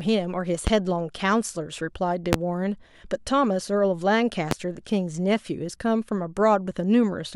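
Three loud pops break into the speech, at 0.67–0.70 s, 2.33–2.36 s and 4.51–4.54 s. Each is a single sharp hit lasting around 30 ms, sitting well above the voice: the first roughly 15 dB over it, the second the biggest at something like 25 dB, the third about 20 dB. The talking carries straight on underneath each one. That's a likely electrical jolt, from a plug, switch, static or driver glitch, dumping a spike into the signal chain.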